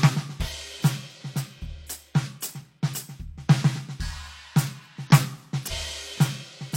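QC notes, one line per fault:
0.42–0.49 s, 2.56–2.62 s, 5.07–5.11 s and 5.67–5.72 s, damaged data in a compressed stream: four short glitches, each around 45 to 65 ms, cutting into the music. The compressed data at those spots is corrupt, so the decoder misreads the frames, loses sync and hunts for the next good frame header. That garbled decode is what you hear at each spot.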